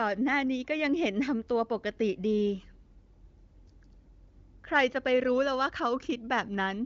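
Nothing technically wrong turns up in this speech recording; it carries the typical wideband HD Voice sound, with the top end stopping at about 7.2 kHz as AMR-WB does, and any coding trace is faint at most, which fits the codec's high 23.05 kbit/s rate.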